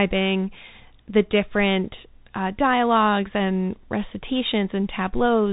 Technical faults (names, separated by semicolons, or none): Bluetooth CVSD headset codec